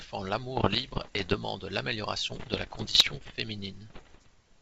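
Bit errors on an ADPCM link strike at 0.56–1.35 s, 2.30–3.33 s and 3.90–4.28 s, at roughly one, one and a half and one percent of bits respectively. Each flip derails the decoder's step size and predictor, so pops and rough bursts ring on. They appear as spikes and level wobbles in the waveform and as vertical streaks on a spectrogram.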